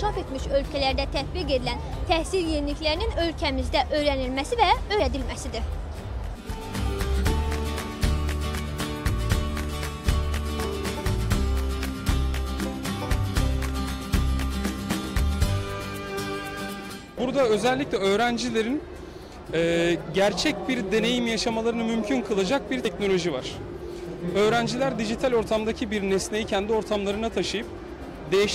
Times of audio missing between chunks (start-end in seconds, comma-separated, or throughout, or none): 5.00, 10.95, 16.90, 22.85